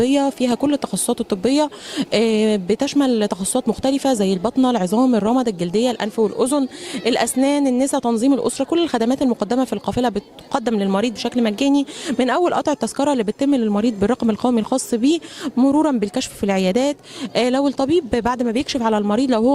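No technical faults can be heard anywhere in this recording. Nothing in the sound calls for a timestamp or an account of something going wrong.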